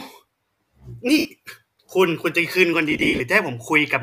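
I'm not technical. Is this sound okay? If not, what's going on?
No. The Bluetooth link dropped chunks of audio, known as lost LE Audio frames, around 1.18 to 1.25 s and again, scattered, from 2.91 to 3.20 s. The receiver filled each gap by guessing, so the speech briefly turns into a hissy, smeared blur.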